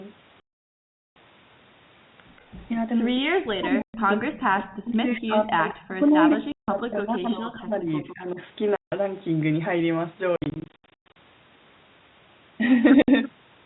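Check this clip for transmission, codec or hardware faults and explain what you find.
Yes, there's a fair bit going on: repeated packet loss filled with silence, a long stretch of speech suppressed in double talk, and two brief echo leaks.

Packet loss filled with silence hits at 0.40–1.16 s, 3.82–3.94 s, 6.52–6.68 s, 8.76–8.92 s, 10.36–11.16 s and 13.02–13.08 s. Lost packets were replaced with dead silence, so the speech drops out with hard edges. The gaps land in 20 ms steps, which fits 20 ms packets. The first gap is about 0.76 s long. The 10.36–11.16 s patch is choppy, with about half a second lost in runs no longer than 120 ms.

From 3.41 to 8.38 s the speech keeps dipping, for about 4 seconds in total and by around 30 dB at its deepest. This is likely speech suppressed in double talk: with both ends talking, the echo canceller couldn't tell the near talker from loudspeaker echo and turned everything down.

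At 5.69–5.85 s and 8.08–8.15 s there's a faint repeat of the voice, roughly 20 dB down and about 170 ms and 157 ms late. That's likely echo leak, where the far end's loudspeaker sound got past its canceller and came back.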